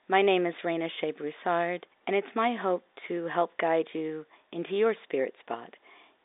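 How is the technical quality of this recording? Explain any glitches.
No glitches are audible: the speech arrives over a G.711 telephone channel, with the line band running from 300 Hz to 3.7 kHz and nothing above 3.8 kHz, which is simply that path's normal bandwidth.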